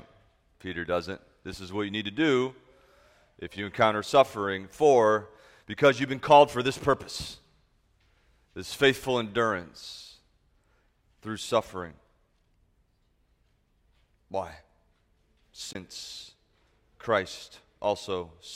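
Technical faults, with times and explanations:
15.69 to 15.75 s, damaged data in a compressed stream: a stretch of the encoded file got corrupted, so the decoder misread those frames, lost sync and had to hunt for the next valid frame header, leaving a brief glitch of about 64 ms.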